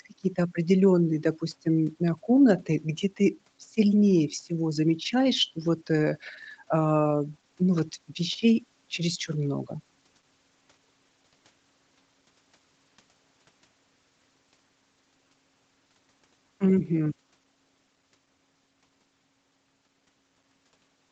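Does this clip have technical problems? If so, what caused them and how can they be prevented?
No, no faults are audible.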